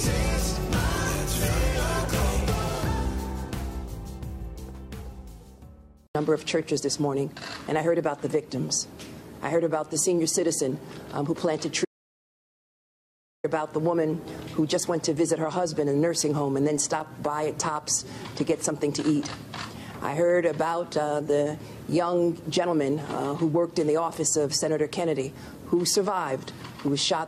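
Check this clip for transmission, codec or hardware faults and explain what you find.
There is one fault, an audio dropout to silence. From 11.85 s to 13.44 s the sound stops abruptly and the clip falls to dead silence for about 1.6 s, with no background or room tone underneath, before the audio returns mid-flow. Whatever happened during that span is simply missing. The likely cause is that the input was briefly lost, through a disconnected device, a broken link or an accidental mute, while recording continued to write silence.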